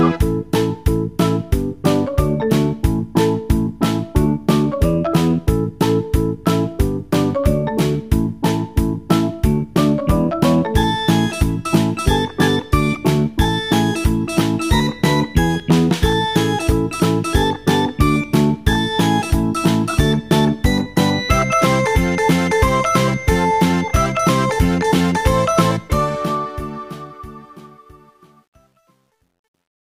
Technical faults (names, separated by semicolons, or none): truncation distortion on a fade